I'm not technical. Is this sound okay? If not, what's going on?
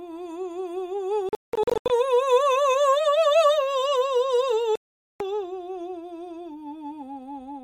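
No. The music most likely passed over a wireless link to headphones and suffered Bluetooth dropouts: chunks of audio arrived too late and were thrown away. Between 1.29 and 1.90 s the music keeps cutting out in short bursts, the longest gap about 0.18 s, with roughly 0.43 s missing in total. From 4.76 to 5.20 s it goes silent almost throughout. Each time, the music comes back further along, as if it had kept playing.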